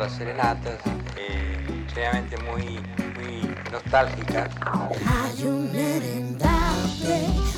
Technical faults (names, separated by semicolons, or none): none